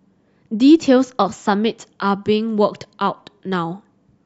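From 0.26 s to 4.10 s, faint, regular ticks recur about five times a second, some twenty in all, riding on the speech. These are clock slip clicks, likely from two unsynchronised clocks drifting around 150 ppm apart, each slip dropping or repeating a single sample.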